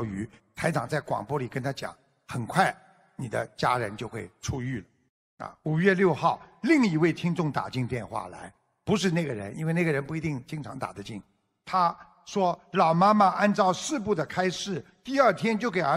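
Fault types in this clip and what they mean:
No technical faults can be heard anywhere in the signal, with no interruptions, level problems, distortion or added noise at any point.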